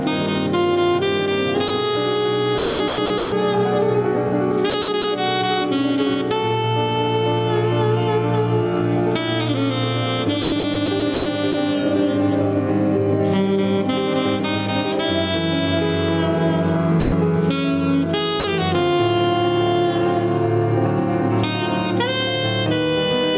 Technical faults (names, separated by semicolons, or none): gain pumping; sound dropped by the voice detector; sound chopped by the voice detector